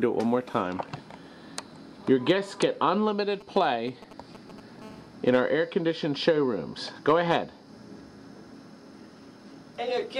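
A nearby 2G phone exchanging signalling bursts, picked up and rectified by the audio circuitry, causes GSM signalling bursts from 3.41 to 4.83 s: galloping ticks and brief 217 Hz buzzes, roughly 20 dB below the signal. At 4.83 s the phone settles into continuous call transmission, producing GSM phone buzz until 6.18 s, a steady, raspy 217 Hz tone rich in harmonics, about 29 dB down.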